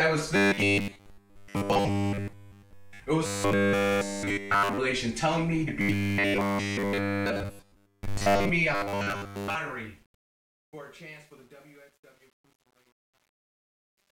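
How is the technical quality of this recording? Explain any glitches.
The recording has two clear technical problems: a recurring robotic buzz and a gritty fade at the end.

Robotic sound from repeated short buffers occurs from 0.36 to 3.01 s, 3.26 to 4.78 s, 5.81 to 8.49 s and 8.75 to 9.55 s. It is a rigid, metallic buzz pinned at 100 Hz, likely from audio arriving too slowly and the last 10 ms being looped. Nearly all of the first three stretches is affected, and most of the last.

Truncation distortion on a fade runs from 8.62 s to the end. As the fade-out lowers the level, the sound turns grainy, worst from 9.78 s onward. Too few bits without dither turn the waveform into coarse steps, consistent with about 9-bit resolution.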